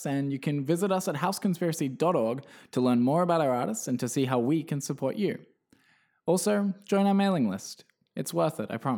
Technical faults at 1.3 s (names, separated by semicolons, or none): none